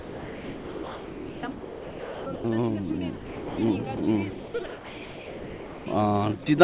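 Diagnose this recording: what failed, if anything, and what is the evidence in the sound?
The trouble sits in call processing, at the sender's voice detector, and it shows up as sound chopped by the voice detector twice: from 0.00 to 2.44 s and again from 4.30 to 5.86 s. In both stretches the sound keeps breaking up, with holes filled by comfort noise. Most of each stretch ends up as fill, about 2.27 s and 1.44 s respectively. The likely cause is the detector gating on and off and the far end filling each gap with comfort noise.

The same stage also produces sound dropped by the voice detector in three places: 3.16 to 3.58 s, 3.97 to 4.00 s, and 6.43 to 6.46 s. The first dropout is the longest, about 0.4 s of sound swapped for steady noise before it snaps back. The other two are 30 ms blips. The likely mechanism is the detector mistaking quieter material for background and stopping transmission, with comfort noise played in its place. 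Everything sits below 4 kHz, which fits the narrowband G.711 A-law call path.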